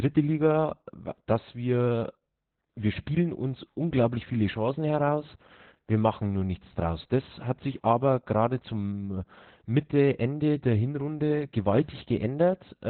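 Opus voice compression runs through the whole speech clip, with heavy damage that points to a very low bitrate near 8 kbps in narrowband SILK mode. The speech sounds muffled, hoarse and slightly robotic. On a spectrogram, everything above about 4.3 kHz is blank.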